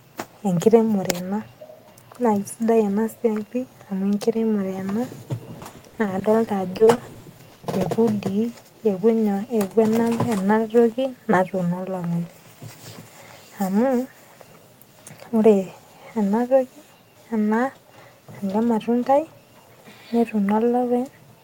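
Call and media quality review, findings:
Choppy, robotic speech from 5.59 to 7.87 s. About twenty short holes, none longer than 40 ms, totalling 460 ms, each bridged by stretching the preceding sound. Cause: repeated packet loss in the network or receive path, with concealment covering a fifth of that stretch.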